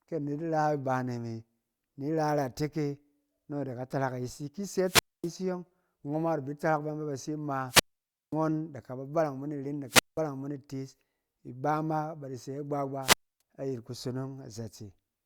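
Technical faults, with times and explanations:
4.83–5.32 s, 7.67–8.35 s, 9.87–10.21 s (just before "mo itees ibama bada") and 13.01–13.41 s: wireless microphone squelch dropout. The radio link fades, hiss rises, then the receiver's squelch mutes the output for about 0.25, 0.53, 0.19 and 0.28 s before speech returns.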